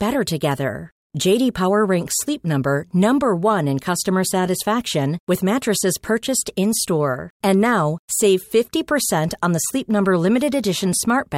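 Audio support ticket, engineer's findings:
No faults found in this speech clip; nothing to report for this ticket.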